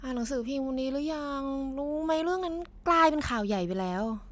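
No technical faults can be heard anywhere in this speech recording. Nothing in the sound points to a problem in how it was captured, processed or delivered.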